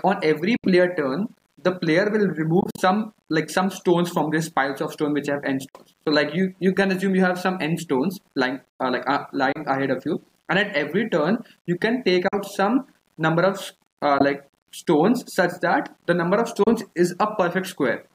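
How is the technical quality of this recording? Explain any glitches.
Two problems run through the recording: a constant grain and a series of brief silences.

A gritty, grainy distortion sits on the whole clip and shifts with the sound, roughest in quiet passages, with the error about 45 dB below the signal. The likely cause is low bit depth without dither: values rounded to a coarse grid, which fits a 9-bit word, so the error tracks the signal.

Seven short holes cut the audio, and each time it resumes further on, as if it had kept playing underneath. They fall at 0.56 s (about 70 ms silent), 2.61 s, 5.69 s (56 ms), 9.52 s (28 ms), 12.28 s (42 ms), 14.18 s (14 ms) and 16.63 s (28 ms). The one at 2.61 s breaks into several gaps spread over about 168 ms, the longest 42 ms. These are likely Bluetooth dropouts, with packets arriving too late for the headphones.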